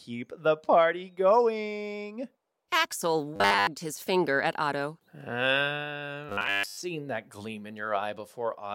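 At 3.36 to 3.67 s and 6.29 to 6.77 s there's robotic sound from repeated short buffers: a rigid 100 Hz metallic buzz, likely from a 10 ms buffer looping, fully then mostly.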